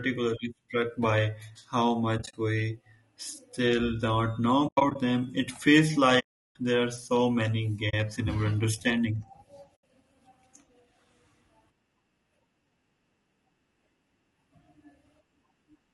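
The speech sounds rough and grainy throughout. This is likely low-delay AAC compression, and the damage fits a bitrate around 32 kbps. AAC frame loss with muting leaves scattered dropouts at 2.17–2.34 s and 4.67–4.96 s, and soft-edged silent gaps at 6.19–6.56 s, 7.89–7.94 s and 9.75–9.83 s. Lost frames are decoded as silence, so the sound fades out and back in. The longest gap is 0.36 s, at 6.19 s.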